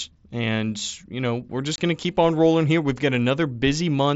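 At 1.76 to 1.78 s, between "you know we're" and "going to keep on", there's unconcealed Bluetooth headset packet loss over the mSBC link. About 22.5 ms of speech simply drops out, which fits three lost frames, leaving a hard-edged gap.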